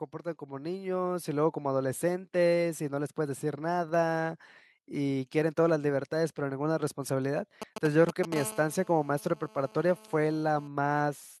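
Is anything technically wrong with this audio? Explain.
Yes, there are three faults.

From 0.39 to 1.56 s, automatic gain rising: the gain control judges the input too quiet and raises gain by about 6 dB, so speech and background swell together.

From 7.62 to 8.34 s come GSM signalling bursts: a nearby 2G phone's intermittent transmissions are rectified by the audio circuitry, giving galloping ticks and short 217 Hz buzzes only slightly below the speech.

From 8.36 to 10.68 s, GSM phone buzz: the phone now transmits continuously at 217 bursts per second, heard as a steady, raspy, harmonic-rich buzz about 19 dB below the speech.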